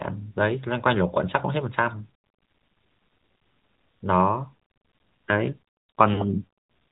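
Throughout, the speech sounds band-limited and plainly buzzy and synthetic, with nothing above 4 kHz. This is the AMR narrowband mobile codec: an 8 kHz vocal-tract model rebuilds the voice from a few pulses per subframe, and the plainly audible damage fits a mid-rate mode around 10 kbps.

From 6.14 to 6.25 s the voice briefly smears and dips, then returns rough for a moment. These are lost AMR speech frames: about 40 ms failed, fitting two 20 ms frames, and the decoder stretched the last good pitch and vocal-tract settings at falling gain.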